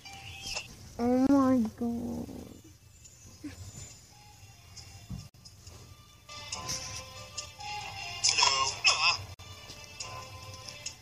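Pieces encoded separately were joined untrimmed, so encoder start-up delay and last-frame padding remain. The sound drops into a gap at a join of encoded pieces at 1.27 s (27 ms), 5.29 s and 9.34 s (each 49 ms), repeating every 4 s with smeared edges.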